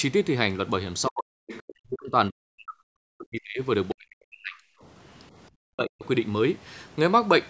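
From 1.1 to 3.62 s the speech sinks by as much as about 40 dB for roughly two seconds in total, which points to speech suppressed in double talk. The echo canceller likely turned the talker down because both sides spoke at once. Unlike a network dropout, the fade tracks the overlap. Inside that stretch, a second voice leaks through at 1.47 to 1.63 s, well below the talker, and more loudly at 1.91 to 1.95 s. This is the other side's voice leaking through, likely echo left in the microphone after the canceller. Ordinary crosstalk would be steadier, while these are brief scraps. The same suppression likely returns at 3.94 to 4.6 s and 5.57 to 6.05 s, dipping the talker hard for a fraction of a second each time.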